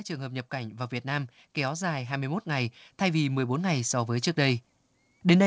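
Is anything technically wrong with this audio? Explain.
Yes. From 0.07 s to 4.36 s there is automatic gain rising: the level climbs steadily by about 9 dB over roughly four seconds. The gain control judged the input too quiet and kept raising its gain, so the speech and the background noise swell together rather than the speech alone getting louder. The effect is a slow, even fade-up of the whole sound. It plays through a call path whose band limit of 8 kHz fits a wideband codec such as G.722.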